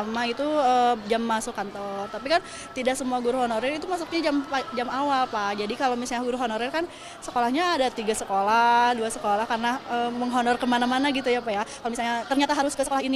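From 11.44 s to the end at 13.15 s there is a time-stretched section: the pace suddenly jumps to about 1.74 times normal speed while the pitch holds steady, so the audio turns rushed. This was likely caused by software squeezing the passage to fit a set length, discarding short slices to keep pitch intact. On a spectrogram, harmonic spacing is unchanged but events crowd together, and the waveform shows compressed envelopes with small discontinuities at the splice points.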